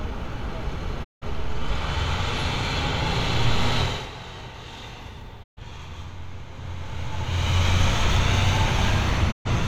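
Digital broadcast dropouts at 1.03–1.25 s, 5.42–5.61 s and 9.30–9.50 s: the receiver mutes after a few lost frames, with 20 ms fades into silence, showing as blank vertical gaps on a spectrogram and flatlines in the waveform.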